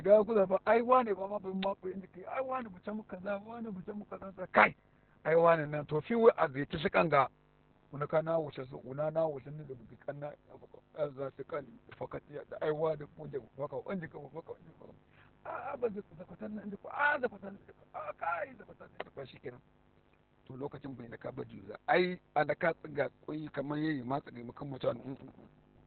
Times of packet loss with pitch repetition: none

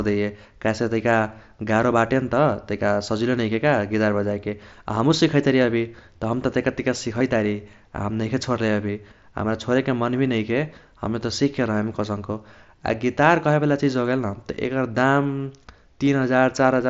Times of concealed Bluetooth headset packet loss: 5.64, 7.19, 16.05

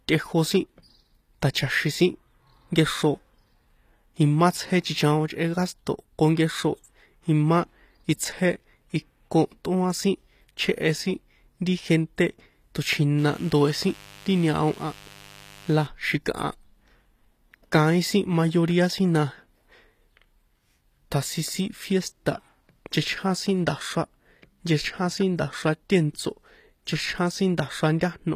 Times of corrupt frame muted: none

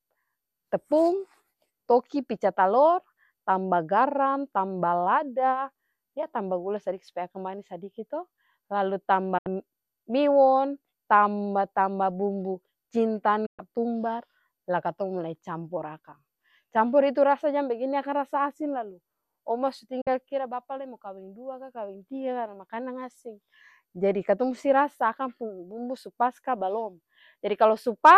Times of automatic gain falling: none

